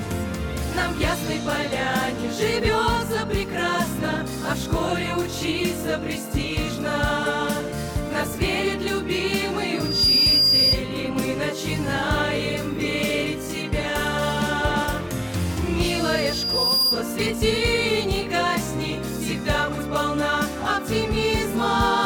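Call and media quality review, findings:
Loudspeaker feedback squeal, 9.74–10.80 s: 4.8 kHz tone swells in about a third of a second and sits a few dB above the programme. Mic re-capturing its own speaker; loop gain over unity at that frequency.

Same squeal, 15.83–17.06 s: identical 4.8 kHz pitch, slower rise of roughly a second. Spectrogram shows a bright horizontal line at 4.8 kHz fanning in. Waveform shows a growing sinusoidal envelope.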